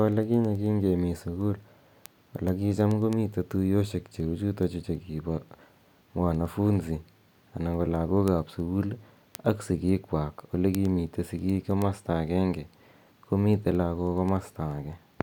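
Speech runs through a continuous train of word clock ticks from 0.12 s to 15.14 s, about ten per second, some 150 in all, sharp and uneven in strength. The receiving device is free-running rather than locked to the sender's clock, which is off by roughly 200 ppm, so a single sample is slipped or repeated at each crossing. The metronomic spacing separates them from random vinyl-style crackle, and their brevity separates them from buffer dropouts, which leave audible gaps.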